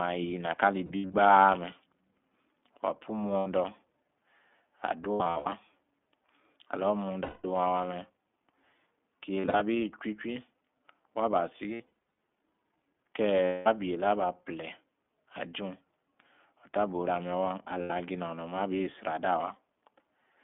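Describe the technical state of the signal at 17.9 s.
Packets carrying iLBC frames were lost from 17.82 to 17.92 s, about 80 ms, consistent with four 20 ms frames. The decoder filled the gap by repeating the last pitch cycle blended with noise. The result is a brief held, faintly buzzy vowel-like tone, and the voice snaps back almost immediately afterwards. Underneath, the iLBC codec's narrowband coding confines the line to roughly 200 Hz to 3.5 kHz, giving the speech a plainly audible rough, synthetic edge.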